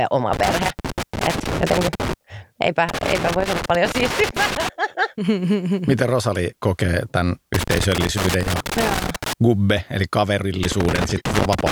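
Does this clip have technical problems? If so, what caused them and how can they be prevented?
Yes. Loose connector crackle breaks up the speech at 0.33–2.13 s, 2.89–4.69 s, 7.54–9.33 s and from 10.63 s to the end. A worn or dirty contact keeps making and breaking, chopping the signal into irregular scratchy bursts. Cleaning or replacing the connector and securing the cable against movement prevents it.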